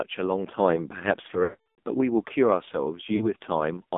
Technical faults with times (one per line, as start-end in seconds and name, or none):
0.00-3.97 AMR narrowband mobile codec
1.44-1.87 lost AMR speech frames
3.16-3.29 lost AMR speech frames